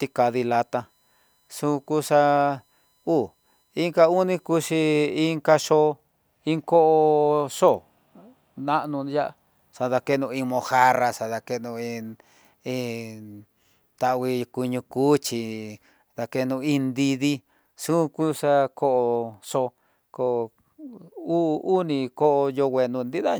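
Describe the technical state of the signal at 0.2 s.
At 0.2 s there is USB whine, running from the start to 5.07 s: a faint, fixed-pitch tone on a 1 kHz series, strongest at 4 kHz, from the bus's 1 ms frame current leaking in through the power or ground. Unlike mains hum, it sits on kilohertz multiples rather than 50 or 60 Hz.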